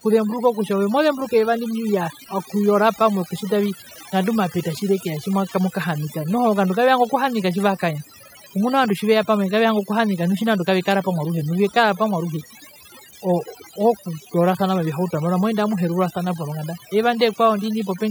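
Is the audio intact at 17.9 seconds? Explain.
No. At 17.9 seconds the speech is still affected by overdone noise removal, which runs through the whole clip. A noise reduction setting that is too strong pushes frequency bands near the noise level far down or off. The background drops and breaks up into twinkling specks.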